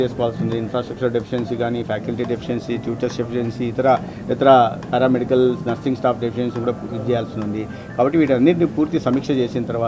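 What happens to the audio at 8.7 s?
Nothing goes wrong at 8.7 s; the audio plays through that moment intact, with no dropout, click or distortion.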